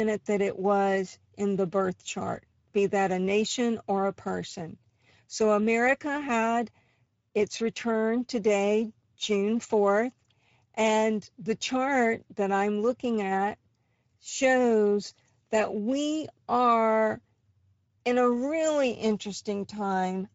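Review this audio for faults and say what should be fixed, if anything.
The speech shows Speex codec damage from start to finish. It is plainly audible. Speex is a CELP coder that models the voice with a filter and an excitation signal. Here the excitation gets too few bits, so the speech sounds noisy and hoarse throughout. The amount of damage fits a bitrate of about 17 kbps. To fix it, re-encode from the original at a higher Speex quality setting, or use a modern codec such as Opus.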